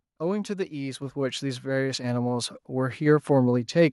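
Microphone volume stepped up at 1.02 s and again at 2.04 s in this speech clip: the level jumps by about 5 dB at the first point and about 4 dB at the second. Each time, the capture software judged the microphone too quiet and raised the device's input gain in a single step. Because the change happens before any processing, the voice and the background noise both get louder together, abruptly.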